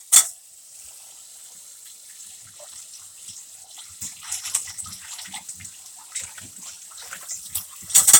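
No technical faults can be heard in this recording.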